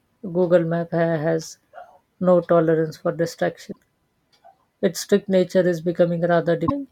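At 3.71 s, just after "no tolerance for", the speech jumps forward and a short garbled glitch of about 50 ms takes its place, ending at 3.76 s. The same thing happens from 6.66 to 6.71 s. This is likely a broken MP3 bit reservoir: with frames of about 24 ms missing, the next frames reached back for borrowed data and decoded someone else's bytes. A plain dropout would only lose audio, but here the frames after the cut are decoded from the wrong data as well.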